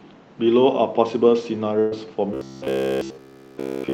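A burst of packet loss strikes from 1.79 to 1.93 s. About 120 ms of audio failed to arrive in time, and the receiver covered the gap by extending the last sound while fading it down. The result is a brief held buzz or dying hiss, with no true silence, before the speech picks up further on with that stretch gone.

From 2.34 s to the end, the speech has robotic sound from repeated short buffers, likely because new audio arrived too seldom and the last 15 ms or so kept being looped in place of the real signal. Practically everything heard there is repeats, stamping a rigid, metallic 66.7 Hz buzz onto the speech, which only loosely follows its original shape.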